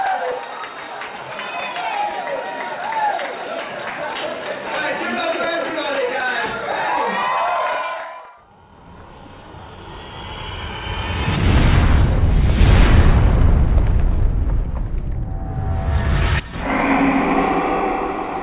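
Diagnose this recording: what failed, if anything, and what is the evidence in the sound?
Nothing failed; no fault is audible in the recording.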